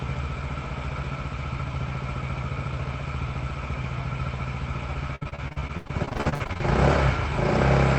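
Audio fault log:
5.15–6.62 s repeated packet loss (robotic sound). Packets go missing again and again, leaving a rapid run of short holes. Each hole is filled by extending the sound just before it. About 0.6 s is patched, 41% of the span. The longest hole is 86 ms. The result sounds choppy, with pieces missing.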